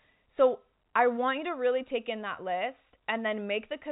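No faults heard; the speech sits in the ordinary G.711 telephone band, with nothing above about 3.8 kHz.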